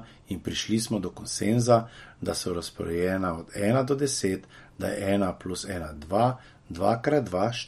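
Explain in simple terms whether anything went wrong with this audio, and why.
MP3 compression is audible from start to finish: the speech has a watery, swirly edge and nothing above 15.7 kHz. The likely cause is an encoder that, short on data, cut the treble and dropped quieter detail that flickers in and out.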